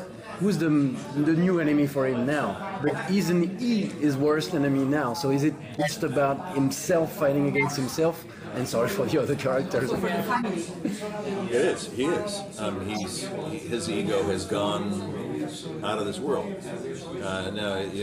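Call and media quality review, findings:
Corrupt frame decoded: short chirps or noise bursts at 2.82–2.94 s, 5.74–5.91 s, 7.55–7.72 s, 10.34–10.45 s, 12.95–13.06 s. Decoder played bit-damaged frames; misread gains and codes put energy at wrong frequencies, roughly two to three frames each, loudest early.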